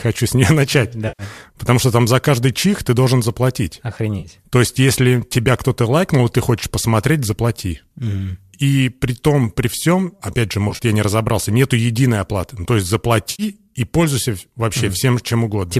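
Speech with AAC frame loss with concealment at 1.08–1.23 s, 4.19–4.28 s after "чих ты должен заплатить", 10.69–10.81 s between "при всем опять же" and "я не разобрался нету", and 13.31–13.43 s between "то есть" and "и пользуйся". The losses run about 110, 50, 70 and 80 ms. The decoder rebuilds each gap from the last good spectrum, so these sound like brief smeared, noisy patches rather than clean silent dropouts or clicks. The 10.7 s patch is broken into short bits across about 100 ms, which fits the 10 ms frames of the likely low-delay AAC link.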